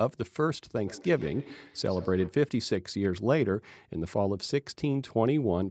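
From 0.75 to 2.41 s there's feedback echo between two devices: another device's playback loops back into the mic, repeating roughly every tenth of a second, about 18 dB down.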